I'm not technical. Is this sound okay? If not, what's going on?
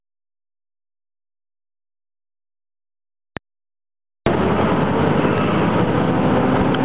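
No. There are loud pops: sharp clicks at 3.37 s, a quick double pop between 5.19 and 5.43 s, and another at 6.61 s, likely from electrical glitches.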